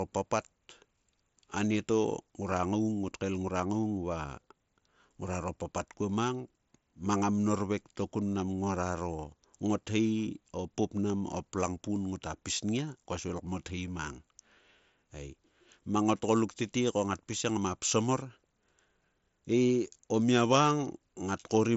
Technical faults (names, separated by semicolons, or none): none